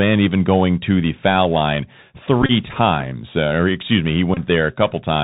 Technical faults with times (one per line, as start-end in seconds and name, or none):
0.00-5.23 Bluetooth CVSD headset codec
2.42-2.51 Bluetooth headset packet repeated
4.34-4.39 Bluetooth headset packet repeated